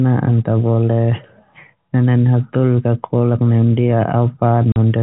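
A speech recording carried over G.711 telephone coding, so nothing above 4 kHz comes through. At 4.72 s the sound drops out completely for 40 ms, ending at 4.76 s. The hole has hard edges. This is packet loss filled with silence. The gap fits two lost 20 ms packets, and the receiver played silence in their place.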